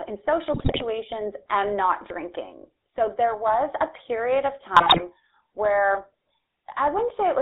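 Speech heard through the GSM full-rate codec, with a buzzy, gravelly roughness and a band held to about 250 Hz to 3.7 kHz, seen as a spectrogram with nothing above or below. GSM bit errors break it into squawks and gargling at 0.52–0.83 s, after "in social", and 4.74–5.01 s, after "period of". Those spans show as smeared, distorted spectral frames and sudden level spikes in the waveform.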